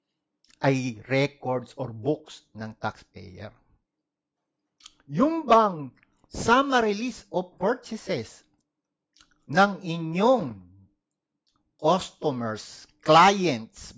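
Nothing in this recording stood out as a technical problem on listening.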